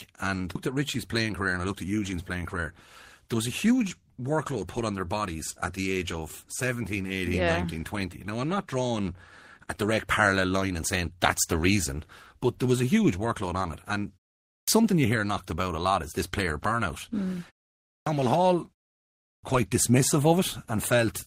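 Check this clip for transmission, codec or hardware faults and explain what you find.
Three kinds of fault are audible in this speech: a skip ahead near the start, two bursts of jitter buffer speed-up, and three clipped starts after pauses.

At 0.55 to 0.57 s the speech jumps abruptly forward, with no gap to mark the join. This is a skip ahead: roughly a second of audio was discarded, either lost in transit or dropped by an overflowing jitter buffer, and playback resumed at the later audio already queued.

From 0.69 to 2.62 s the speech sounds hurried, running about 10% fast at unchanged pitch, and again from 3.22 to 4.16 s, just before "workload put on their", at about 5% fast. This is jitter buffer speed-up. The buffer had built up excess delay, so the receiver trimmed it by repeatedly cutting pitch-period-sized slices, removing roughly 200 ms and then about 50 ms.

At 14.55 s, before "something you hear knocked", and at 17.94 s and 19.30 s, speech bursts out of silence with its opening sounds missing, about 125 to 130 ms each time. 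These are clipped starts after a pause. After silences of 0.45 to 0.64 s the output device had gone idle and swallowed the onset while it woke.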